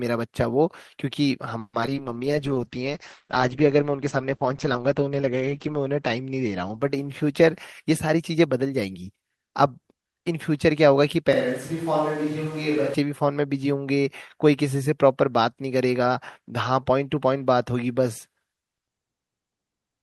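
From 1.59 to 1.98 s there is repeated packet loss with a robotic sound. Four gaps fall within this short stretch, the longest about 140 ms. Roughly 170 ms is filled by stretching the preceding sound and another 80 ms is simply missing, so 44% of the span is concealment. The speech comes out choppy.

At 2.0 s a call bitrate drop sets in and lasts until 8.84 s. The coarser coding and narrowed bandwidth fit a fall from about 40 kbps to 10 kbps. The top end shrinks from around 20 kHz to 8 kHz, and the speech sounds dull and watery. The worst stretch lasts 3.57 s before quality returns.

Inside that degraded stretch, from 2.27 to 2.59 s, a jitter buffer slow-down draws the speech out. The receiver repeats pitch periods to rebuild its reserve, adding 44 ms. The speech plays at 89% speed while the pitch stays the same, giving a drawn-out quality.

From 7.82 to 9.10 s the opposite happens: a jitter buffer speed-up. 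To shed excess delay, the receiver cuts short pieces of pitch periods, removing about a tenth of a second in total. Playback runs at 109% speed with the pitch unchanged, and the speech sounds hurried.

Between 11.33 and 12.94 s the sound abruptly turns roomy and hollow, with thinner bass. The level falls by about 5 dB and room noise rises to about 20 dB below the speech. The likely cause is a switch to a distant microphone, and the return at the end is just as sudden.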